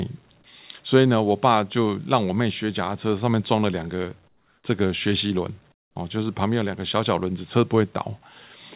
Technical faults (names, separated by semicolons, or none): comfort noise in place of the background